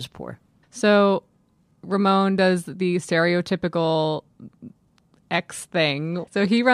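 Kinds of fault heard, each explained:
No technical faults can be heard in this speech recording. Nothing in the audio interrupts or disturbs the signal in a way that would point to a problem anywhere in the chain.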